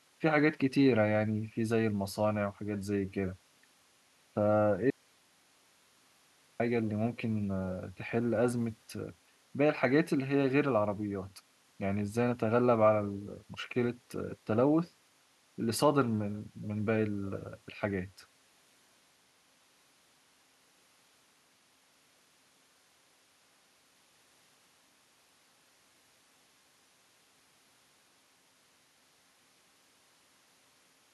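From 4.90 to 6.60 s, an audio dropout to a faint residue: speech cuts abruptly, not fading, to hiss about 40 dB down, likely signal lost before a live path.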